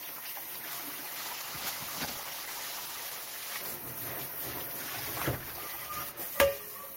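From 1.2 s the sound turns coarse and watery, with the top end dulled and muffled. The roughness is deepest for about 2.2 s before clarity returns by 4.27 s. This is a call bitrate drop: the connection's bandwidth estimate fell, and the encoder had to describe the audio with far fewer bits, which quantises detail more crudely and trims high frequencies. The change in quality fits a fall from around 32 kbps to roughly 15 kbps.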